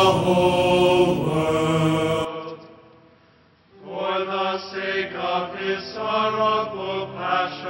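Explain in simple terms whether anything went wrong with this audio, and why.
An input switch to a poorer device happens at about 2.25 s and lasts to the end. From that moment the sound suddenly turns duller and boxier, with nothing left above 5.6 kHz, and it becomes noticeably quieter, with a faint new background noise. There is no gap at the change. This is likely the recording switching mid-way to a lower-quality microphone, such as a headset in call mode, which captures a narrower range of sound.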